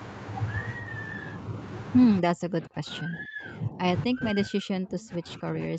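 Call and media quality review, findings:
Speech suppressed in double talk, 2.21–3.82 s: near-end speech pulled down by up to about 40 dB, dipping and breaking up in pieces for roughly 1.5 s. Likely the echo canceller ducking while the far side talks.

Same symptom, 4.07 s to end of clip: speech dropped by up to about 40 dB. Unlike packet loss, the gaps likely track the other talker's activity.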